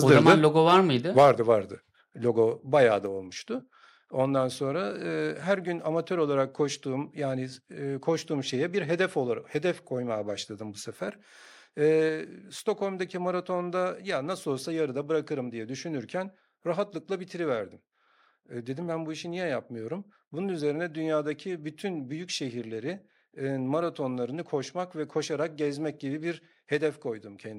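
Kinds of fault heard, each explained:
Microphone overload: The loudest peaks are flattened, adding a harsh, crackly edge. This happens from 0.09 to 0.77 s, about 7 dB over, and from 1.18 to 1.31 s, about 4 dB over, with more clipping there. Input volume was likely set too high.
Microphone volume stepped down: Voice and background drop suddenly in level together. Steps of about 3 dB come at 1.02, 2.04 and 12.09 s, and about 2 dB at 3.06 s, just after "bayağı da". Call software likely lowered the input after clipping.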